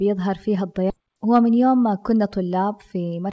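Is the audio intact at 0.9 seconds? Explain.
No. There's a skip ahead right there, between about 0.90 and 0.92 s. Roughly 0.7 s of the speech just isn't there. It was dropped on the way or thrown out by the jitter buffer when it overflowed, while later audio was already queued. Nothing fills the gap, so playback jumps straight forward and the two sides are joined almost directly, with an abrupt cut in the middle of the talking. That's all over a G.722 call path, which has nothing above 8 kHz.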